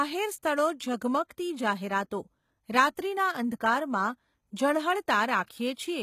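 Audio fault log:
throughout: HE-AAC compression, likely the cause of the gritty, lispy treble. The upper band is rebuilt from copied lower bands rather than coded, so its harmonics don't line up. Content stops near 14.9 kHz, and the plainly audible damage fits a low bitrate of about 20 kbps. Unlike a simple low-pass, the top stays bright but false.
1.28 s: pre-echo, a brief hiss of about 19 ms just before "જાહેરાતો રાત્રિના", softening the attack. The codec spread noise sized for the loud onset across the quiet moment before it. Unlike a click or reverb, the smear comes before the attack, not after.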